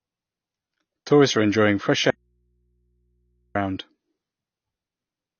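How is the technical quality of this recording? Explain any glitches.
The speech is compromised by lossy coding throughout and by one long break in the signal.

Throughout, the likely cause is AAC compression at a low bitrate. The encoder has too few bits for its frames, so it drops the upper spectrum and coarsely quantises what remains. Nothing is present above 6.6 kHz, which fits AAC-LC at around 24 kbps. The speech sounds plainly dull and muffled, with a smeared, warbling texture on sustained sounds and sibilants.

From 2.10 to 3.55 s there is an audio dropout to a faint residue, lasting about 1.45 s. The wanted signal was most likely lost while the path after the break stayed live. Speech cuts off abruptly and is replaced by mains hum from the open input, roughly 45 dB below the speech level. It returns just as suddenly, and the break sounds like an interruption, not a pause or fade.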